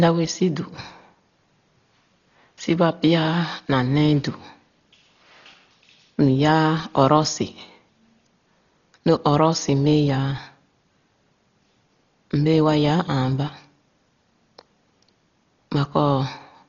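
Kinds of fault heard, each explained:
Dolby Digital compression: The speech sounds dull, with nothing above 7 kHz and rough, fluttering noise around tones. Heavy damage like this likely comes from a very low bitrate, around 32 kbps.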